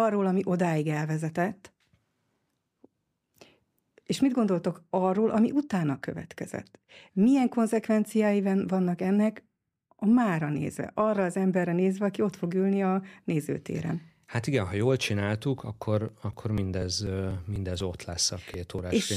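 Periodic USB or driver dropouts run from 15.59 s to 19.03 s: every 0.25 s something stalls the audio path, and a few milliseconds of sound are skipped outright. About fifteen evenly spaced ticks result, heard only while the speech is sounding.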